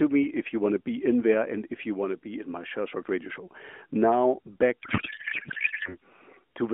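From 4.80 to 5.96 s a codec payload misread turns the speech into garbled warbling noise that barely tracks it, which fits octet-aligned AMR frames being unpacked as bandwidth-efficient. The spectrogram loses its harmonic striations there, showing smeared broadband energy capped near 3.4 kHz, with an irregular waveform envelope.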